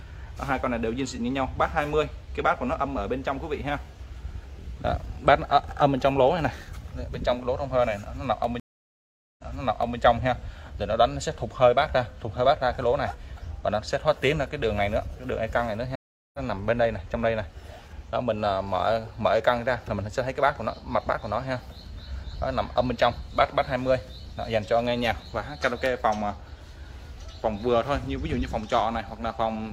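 From 0.45 s to 28.86 s the audio carries periodic USB or driver dropouts. Once every 1.0 s, about thirty times in all, a tiny sliver of signal, around a tenth of a millisecond, is skipped outright. A background task is briefly stalling the bus or driver. The gap is too short to hear as silence. Each one comes through as a small, regularly spaced tick, audible only while signal is present.

At 8.60 s a stream reconnect breaks in. The connection drops, leaving 786 ms of silence, and a fresh decoder picks up mid-stream. Playback resumes 597 ms earlier than where it cut off, so that stretch of audio is heard twice, and the event has settled by 9.98 s. A second stream reconnect follows at 15.95 s with 387 ms of silence. This time the audio resumes roughly 400 ms further on, so that portion is simply missing. It is complete by 16.39 s.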